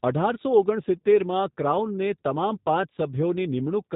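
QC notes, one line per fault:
throughout G.729 codec: speech was rebuilt by a low-rate pulse-model coder, consistent with 8 kbit/s G.729. Nothing passes above 3.8 kHz, leaving it muffled, rough and synthetic.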